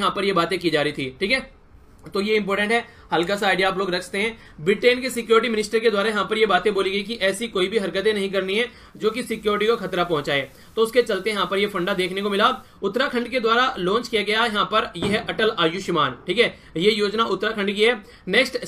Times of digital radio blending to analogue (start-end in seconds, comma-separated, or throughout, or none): 8.87-12.81